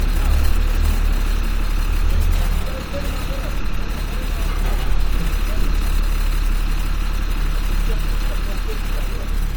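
An everyday-sound recording with generation loss throughout: the swirly, hollow smearing and blurred attacks are heavier than a single pass would give, which fits a 64 kbit/s MP3 likely re-encoded about three times, each pass stacking fresh quantisation noise, though content still reaches 20.9 kHz.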